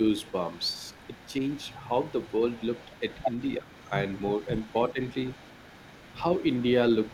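From 0.19 s to the end, a faint delayed copy of the speech trails the original by about 322 ms, sitting well below the direct voice. This is an echo leak: the far end is likely playing the call over a loudspeaker, and its echo canceller is not fully removing what its microphone picks up, so a residual copy returns with the round-trip delay.

Three brief dips in the speech level occur at 0.72 to 0.80 s, 3.58 to 3.71 s and 4.92 to 4.99 s. The first is shallow, the second a deep drop of roughly 150 ms, and the third moderate. This pattern fits speech suppressed in double talk, where both sides speak at once and the echo canceller, likely unable to separate the talker from loudspeaker echo, briefly attenuates both its own talker and the echo.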